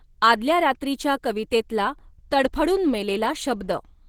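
A speech recording, with Opus compression damage plainly audible from start to end: the sound is muffled, hoarse and grainy. The cause is likely an Opus encoder in its hybrid speech mode at a low rate, fitting roughly 16 kbps. A spectrogram would show smeared, noise-filled upper bands in place of clean harmonic detail.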